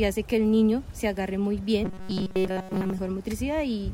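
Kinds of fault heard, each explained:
Robotic sound from repeated short buffers: From about 1.85 to 2.99 s the sound turns into a stiff, metallic buzz pinned at 188 Hz while still loosely tracking the original. The likely cause is audio arriving too slowly, so the playback side keeps looping a tiny chunk, around 5.3 ms, which fits that 188 Hz pitch. Through most of that stretch you're hearing repeats rather than fresh audio.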